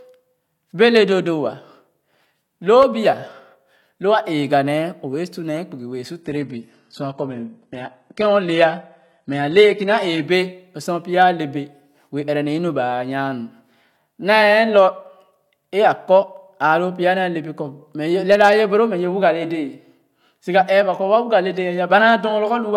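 The connection slowed, so the adaptive stream switched to a lower bitrate from 6.23 to 10.23 s, just after "bee su". The speech abruptly loses everything above 11.8 kHz, consistent with a 16 kbit/s HE-AAC fallback, recovering gaplessly before "bɛ lo".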